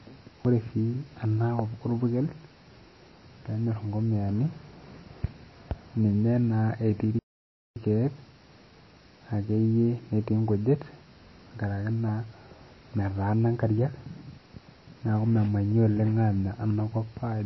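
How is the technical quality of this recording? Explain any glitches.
The recording has audible problems: MP3 compression damages the speech throughout, and one playback stall interrupts it mid-flow.

Throughout, the speech sounds watery with plainly audible codec damage. This is likely low-bitrate MP3 compression, which fits roughly 24 kbps: weak frequency lines drop out frame to frame, and treble is cut. A spectrogram shows a hard ceiling near 5.8 kHz and flickering gaps.

From 7.19 to 7.76 s, the sound stops for about 0.57 s and then resumes. This is likely a playback stall, where the player starved of data. The waveform shows a flat silent gap.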